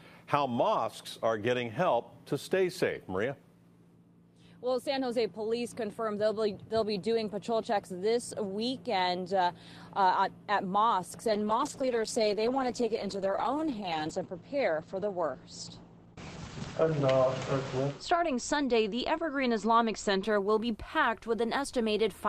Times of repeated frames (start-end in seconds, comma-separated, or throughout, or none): none